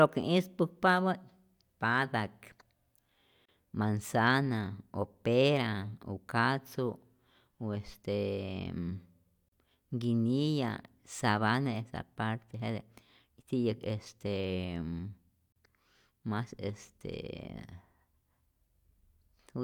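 Gaps at joins of encoded pieces occur at 3.45–3.49, 9.49–9.52 and 15.52–15.56 s, every 6 s. Untrimmed encoder delay and padding leave 31–37 ms silences in the speech before it resumes.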